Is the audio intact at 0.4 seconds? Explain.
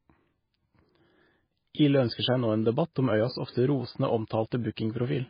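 No, at 0.4 s the speech carries the heavy MP3 compression damage present throughout: nothing above 5 kHz, with watery, swirling artefacts from sparse spectral lines, likely from a very low bitrate near 18 kbps.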